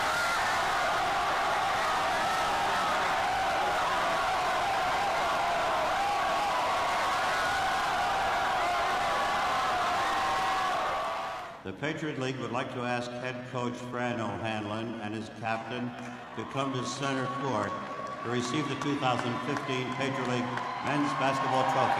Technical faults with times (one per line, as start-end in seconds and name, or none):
12.77-18.15 time-stretched section